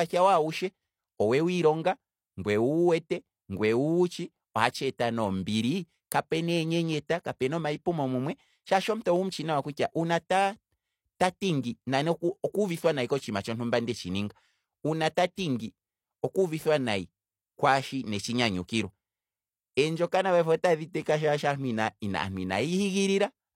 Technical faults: pre-echo

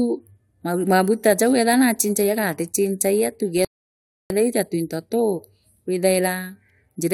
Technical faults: rebuffering stall

